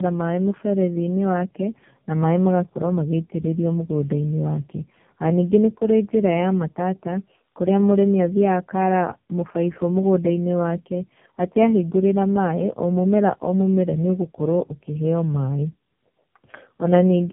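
Speech, passed through tandem speech coding from start to finish: the sound points to a low-rate AMR-NB coder, then G.711, then AMR-NB again. Nothing survives above 3.8 kHz, and the rough, muffled warble is heavier than a single narrowband codec would leave.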